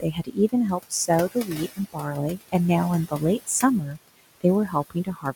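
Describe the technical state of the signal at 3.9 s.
Right at 3.9 s the noise suppressor cuts into the speech itself: from 3.86 to 3.98 s it mistakes part of it for noise and pulls it down by about 9 dB, so that bit sounds swallowed and faint. It's running noise suppressor artifacts the whole time too, cutting the room noise, which sits about 14 dB under the speech, by about 19 dB.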